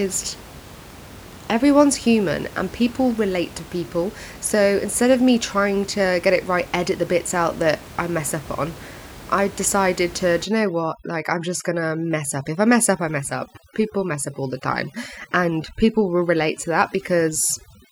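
Overdone noise removal sets in at 10.45 s and runs to the end of the clip. Here a noise reduction stage cuts too hard. Any frequency band close to its estimate of the room noise, which sits about 19 dB below the speech, is pulled far down or switched off, and the quieter parts of the speech go with it. The background drops and breaks up into twinkling, warbling specks.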